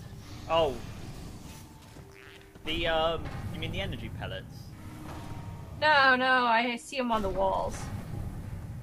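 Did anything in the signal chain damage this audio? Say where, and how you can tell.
No, nothing in the signal chain audibly damaged this.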